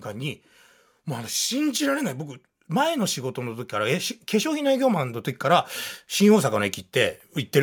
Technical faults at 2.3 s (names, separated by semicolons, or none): automatic gain rising